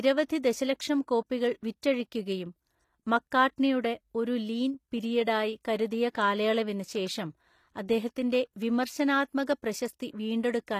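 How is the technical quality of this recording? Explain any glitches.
The recording has plainly audible coding damage throughout and three brief pre-echo glitches.

Across the whole clip the treble sounds synthetic, with gritty, lispy sibilants and no content above 14.9 kHz. This points to HE-AAC compression, likely at a low bitrate around 24 kbps, where the upper band is copied up from lower frequencies. A spectrogram would show repeated, smeared high-band texture ending sharply at 14.9 kHz.

Pre-echo occurs at 0.43 s, just before "ദശലക്ഷം കോപ്പികൾ"; at 1.82 s, right after "ദശലക്ഷം കോപ്പികൾ"; and at 6.14 s, before "കാലയളവിന് ശേഷം അദ്ദേഹത്തിന്റെ". Each lasts roughly 10 to 12 ms. The codec spread noise meant for a sharp onset back into the quiet just ahead of it. Each onset is heard as a short hiss and a softened attack. On a waveform or spectrogram, low-level broadband noise appears just before each transient.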